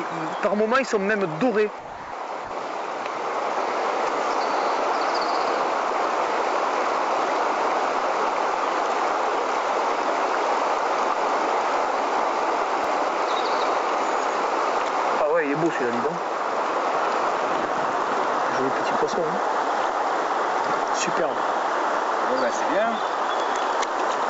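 From 1.79 to 2.12 s, and again briefly from 2.45 to 2.51 s, the sound gives way to a flat, steady hiss. This is most likely sound dropped by the voice detector, with comfort noise filling in. Unlike packet loss, there's no glitch or stutter, just an even noise bed until the sound resumes.

Between 12.40 and 12.84 s come three CD scratch ticks, each well under a millisecond. A scratch defeated the disc's error correction on each turn, and the player patched the damaged samples. Their regular spacing separates them from random crackle or digital clicks.

Throughout, nothing is heard above 8 kHz, which fits a wideband call codec such as G.722.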